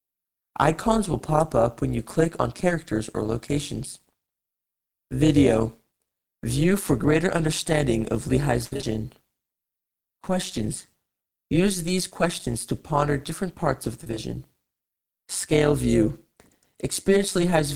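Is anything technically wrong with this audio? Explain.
Yes. Overlap-add ripple runs through the whole speech clip. The audio was framed and rejoined with overlapping windows whose gains do not sum to a constant, so the level swings about 11 dB once per frame, around 200 times a second, heard as a metallic buzz with extra tones around each note.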